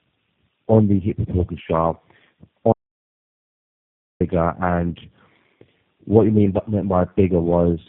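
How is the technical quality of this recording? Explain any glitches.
The recording is degraded throughout and has one complete gap.

Tandem speech coding affects the whole clip. The call passed through three low-rate speech coders in a row, consistent with G.729A, GSM full rate, then G.729A again, so each re-encoded the previous coder's output. The speech sounds rough, muffled and warbly, with nothing above 3.7 kHz.

An audio dropout to silence runs from 2.73 to 4.20 s. The input was likely lost while recording continued, leaving about 1.5 s of total silence with no room tone, and the speech in that span is gone.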